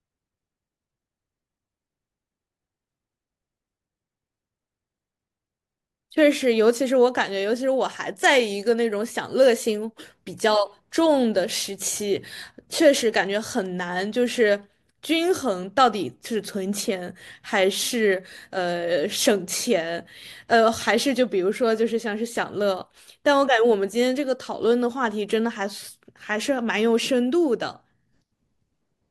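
From about 0.11 s right through to the end at 29.10 s, the speech carries clock slip clicks: a steady, faint ticking, around fourteen a second, which is clearest in louder, sustained stretches and disappears in the pauses. The likely cause is two devices running on unsynchronised clocks roughly 300 ppm apart, so a single sample gets dropped or repeated about every 70 ms, which adds up to several hundred tiny discontinuities across the clip.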